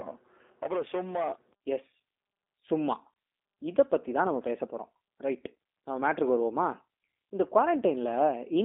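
The speech has passed through the G.729 codec at a rate that fits 8 kbit/s, rebuilding it from a vocal tract model and sparse pulses, so it sounds rough and synthetic throughout, band-limited to roughly 250 Hz to 3.6 kHz, with nothing above 3.7 kHz.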